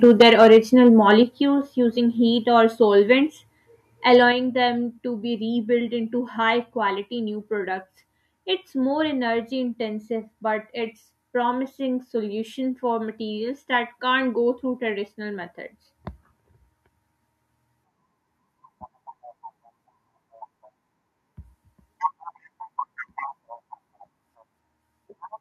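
Microphone overload opens the speech at 0.03 to 0.58 s, most likely from input volume set so high that peaks drive about 6 dB past the converter's limit. The waveform tops are sliced flat across a small share of samples, giving the loudest syllables a harsh, crackling edge. Shorter bursts follow at 0.86 to 0.88 s, right at the limit, and at 4.14 to 4.16 s, about 1 dB over, each a brief gritty crunch on a peak.

Microphone volume stepped down occurs four times: at 0.22 s by about 2 dB, at 1.23 s by about 5 dB, at 3.27 s by about 3 dB, and at 4.32 s by about 5 dB. The likely cause is call software reacting to the overload by cutting the device's input gain in single steps. Voice and background drop together as sudden level falls, with the 0.22 s and 4.32 s steps landing shortly after distorted peaks.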